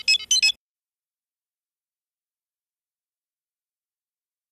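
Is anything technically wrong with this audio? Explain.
No, nothing stood out as technically wrong on listening.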